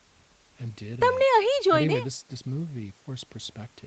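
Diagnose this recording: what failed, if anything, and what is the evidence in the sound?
Nothing has failed: the speech shows the expected marks of a call's microphone processing and a wideband call codec, with its content stopping at 8 kHz, which fits an Opus link at a modest bitrate of around 20 kbps.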